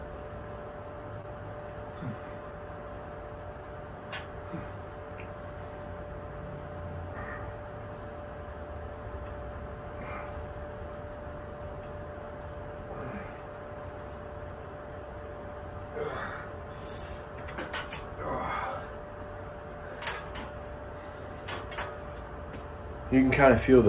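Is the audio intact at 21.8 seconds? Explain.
Yes, the audio is intact at 21.8 seconds, with nothing there beyond the call path's narrow bandwidth, which stops at 4 kHz.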